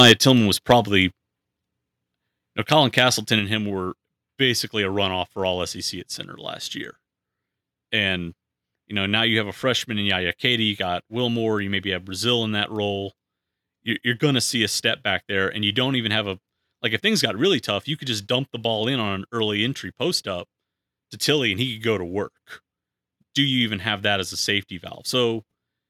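A speech recording with microphone overload: from 0.00 to 0.12 s the peaks drive about 7 dB past the converter's limit, flattening around one sample in twenty into a harsh crackle. A longer burst from 2.72 to 2.99 s, just before "and him were basically", overshoots by about 4 dB and clips only a small fraction of samples. The likely cause is microphone input gain set too high for the converter. The microphone volume is stepped down three times, at 0.12, 1.11 and 3.39 s, the last just before "and him were basically". Each step cuts voice and background together by about 4 dB, most likely the call software's automatic gain control reacting to the clipped peaks.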